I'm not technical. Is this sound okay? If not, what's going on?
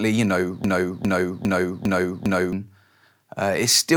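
No. From about 0.64 to 2.53 seconds the speech gets stuck in a broken-record loop: the same 0.4-second piece plays five times back to back, likely because playback stalled and kept repeating its last chunk. Unlike an echo, each repeat is exact and full-strength, and what should have played there is lost.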